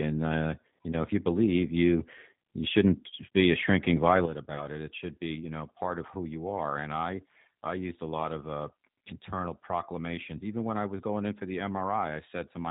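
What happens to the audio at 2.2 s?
At 2.2 s the speech, like the rest of the recording, is passing through a G.729 codec, whose damage here is plainly audible. Each 10 ms frame is rebuilt from a vocal tract filter, a pitch predictor and a handful of pulses rather than the real waveform, and nothing above 4 kHz survives. That coarseness fits an 8 kbit/s stream. The voice sounds band-limited, dull and slightly rough, with a buzzy, synthetic edge.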